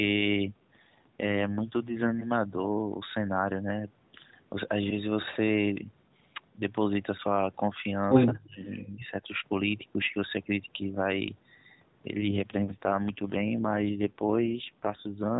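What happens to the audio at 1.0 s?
An AMR rate drop runs from 0.52 to 2.15 s, and the roughness fits the codec stepping down from 12.2 to about 5.9 kbps to spend bits on error protection. The speech turns buzzier and more synthetic, but the bandwidth holds and there is no gap, unlike a band narrowing or dropout.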